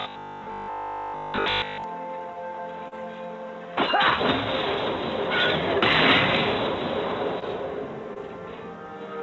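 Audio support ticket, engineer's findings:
Rigid metallic buzz, 0.02–1.84 s, fixed pitch of 50 Hz over essentially the whole stretch. Robotic sound from repeated short buffers, likely a starved receive buffer. The player loops the last 20 ms block while fresh audio is skipped, so the 20 ms repeat period sets the 50 Hz buzz.

Brief smear or wobble at 2.88–2.93 s, about 40 ms missing and 36 ms synthesised. Similar shorter blips at 7.39–7.44 s and 8.14–8.18 s, about 20 ms missing in each. This is short concealed packet loss in the jitter buffer and decoder stage. Late or lost packets are bridged by extending the preceding sound and crossfading back into the real audio. The G.722 path carries nothing above 8 kHz.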